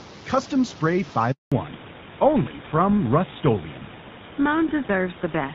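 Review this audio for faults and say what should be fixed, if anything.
A handover gap runs from 1.32 to 1.52 s: the sound drops to dead silence for 200 ms while the call moves between networks, then resumes. Unlike packet-loss concealment, nothing is smeared or repeated across the hole; the audio simply stops. Make-before-break handover, with the new link ready before the old one is released, would prevent it.

From 1.52 s to the end there is a fallback to narrowband. Everything above 4 kHz disappears, so the sound turns dull and muffled, which points to a switch from AMR-WB HD Voice to GSM full rate. A low-rate wideband codec turns raspy but keeps its upper band, while here the top is cut cleanly away. Negotiating wideband on the target network before handover would prevent it. The room noise, about 22 dB below the speech, carries across both sections.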